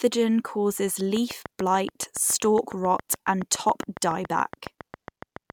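A train of clicks runs from 1.17 s to 5.51 s: about thirty sharp, near-identical ticks at a regular 7.15 per second, peaking around 10 dB above the speech and audible through the pauses. The likely source is interference or a faulty connection or power supply repeatedly injecting the same pulse.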